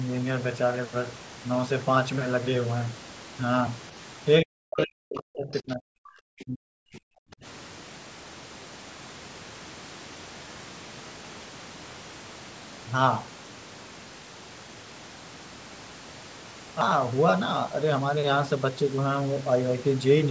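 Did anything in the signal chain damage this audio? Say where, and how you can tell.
Yes. From 4.41 to 7.44 s the speech sinks in level and breaks up, dropping by roughly 40 dB at its deepest across about three seconds, the sound of speech suppressed in double talk. The stage is call processing: with both ends talking at once, the echo canceller likely could not tell the local talker from the loudspeaker echo and pulled the whole microphone signal down rather than let either through.

Inside that same stretch, two brief scraps of a second voice surface, at 5.17 to 5.21 s, about 15 dB below the speech, and at 5.54 to 5.59 s, fainter at about 25 dB down. This is the other side's voice leaking through, again in call processing: the far end's audio, played from the talker's loudspeaker, was likely not fully removed by the echo canceller, so short fragments reached the microphone path. The band tops out at 8 kHz, consistent with the call's microphone processing.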